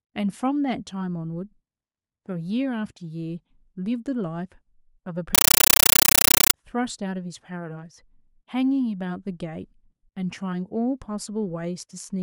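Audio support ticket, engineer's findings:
Compressed stream played as audio, 5.35–6.54 s: loud chattering static replaces speech. Undecoded AC-3 read as PCM. Waveform shows 9.33 ms noise bursts at 31.25 Hz with flat near-silent gaps.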